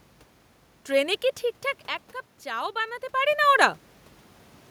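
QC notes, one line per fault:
Nothing stood out on listening to this speech clip; the background room noise and the level changes around 1.5 s and 3 s, where the talker moves relative to the microphone, belong to the recording itself.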